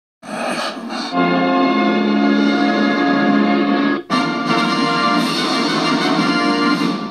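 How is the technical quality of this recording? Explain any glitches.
No glitches can be heard anywhere in this recording; the signal holds steady and intact throughout, with no technical faults to explain.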